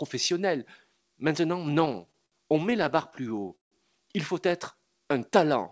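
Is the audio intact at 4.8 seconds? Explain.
No. Just after "faut être", from 4.76 to 5.31 s, the speech drags to about 89% speed at unchanged pitch: a jitter buffer slow-down repeating pitch periods to add 72 ms.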